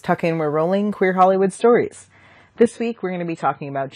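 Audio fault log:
1.32 to 3.95 s, adaptive stream at a lower bitrate: the speech suddenly loses everything above 10 kHz and picks up a swirly, smeared codec edge, with no gap at the switch. That points to the player dropping to a much leaner AAC rendition as the connection slowed.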